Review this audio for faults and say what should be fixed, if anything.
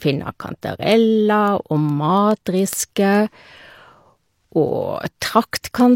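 Word clock ticks run through the speech from 0.22 to 5.94 s, roughly every 0.15 s, about forty in all. Each marks a single dropped or repeated sample as two unlocked clocks, drifting apart by around 150 ppm, slip past each other. Their steady spacing distinguishes them from random digital clicks. Slave the receiving device to the sender's clock, or pass the signal through a sample-rate converter.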